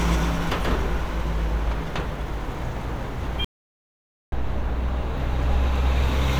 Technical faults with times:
3.44-4.32 audio dropout to silence

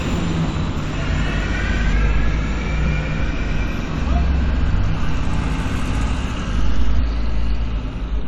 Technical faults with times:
1.92 compressed frames skipped
6.98 compressed frames skipped

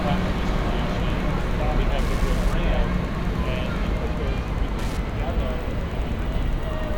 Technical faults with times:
0.00-6.98 Wi-Fi interference

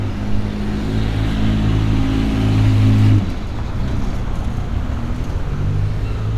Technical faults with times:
none

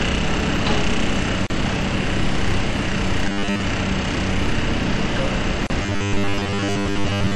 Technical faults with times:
0.00-7.36 MP3 compression
1.47-1.50 gap at a join of encoded pieces
3.25-3.65 robotic sound from repeated short buffers
5.67-5.70 gap at a join of encoded pieces
5.83-7.36 robotic sound from repeated short buffers

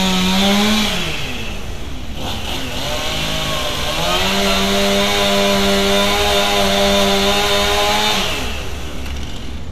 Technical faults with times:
none

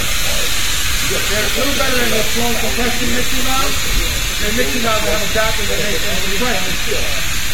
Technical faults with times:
0.00-7.54 AAC compression

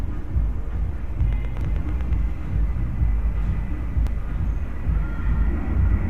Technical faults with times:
0.75 compressed frames skipped
1.21-2.14 train of clicks
1.61 audio missing between chunks
4.07 audio missing between chunks

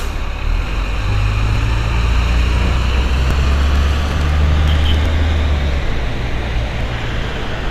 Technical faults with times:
1.56 audio missing between chunks
3.31 audio missing between chunks
3.52-4.95 train of clicks
5.06 audio missing between chunks
6.81 audio missing between chunks

